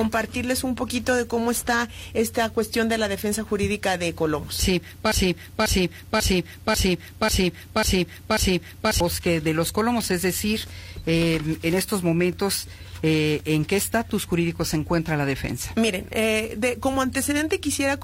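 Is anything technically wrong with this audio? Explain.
Yes. From 5.12 s to 9.00 s the audio falls into a broken-record loop. A 0.54 s fragment plays seven times back to back, identical each time, and whatever should have been heard in that stretch is gone. The likely cause is the player, encoder or stream stalling and resending the last fragment it held. Unlike an echo, the repeats neither fade nor overlap. Unlike a brief stutter, they run on for nearly four seconds.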